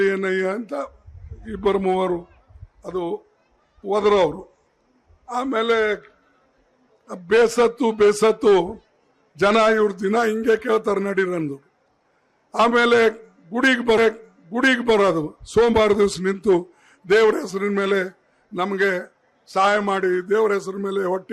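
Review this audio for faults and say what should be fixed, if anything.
A stream segment is repeated: the player fetched or queued the same chunk of the stream twice, so one second of audio from 13.97 s to 14.97 s plays again immediately after itself, adding 1 s to the running time. At the point where playback jumps back to the start of that second there is a small blip, and the passage that follows is heard twice in a row. To prevent it, the player should track segment sequence numbers and drop any segment it has already queued.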